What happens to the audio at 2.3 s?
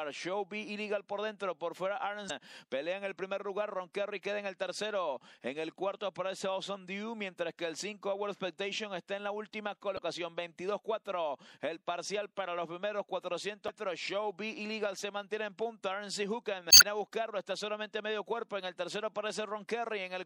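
At about 2.26 to 2.31 s there's a short burst of damaged data in a compressed stream. For roughly 40 ms the decoder is fed bytes it can't make sense of, so it loses its place in the frame sequence and hunts for the next valid header. You hear a quick glitch rather than clean audio.

That glitch sits on top of audible MP3 compression. Quieter frequency content flickers in and out between frames, giving the sound a watery, swirly edge with smeared attacks. The damage is plain enough that it fits a fairly low bitrate, something around 64 kbps, which is the likely cause.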